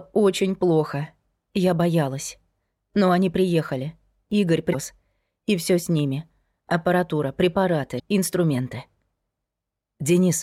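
At 4.69 to 4.75 s, a short burst of garbled sound cuts in, lasting about 55 ms. This is damaged data in a compressed stream. Some of the coded bytes there are wrong, so the decoder cannot read those frames correctly. It loses sync and hunts for the next valid frame header. The result is a brief chirp or blip. The same fault returns at 7.96 to 8.01 s, again about 55 ms long, with a similar brief chirp or blip.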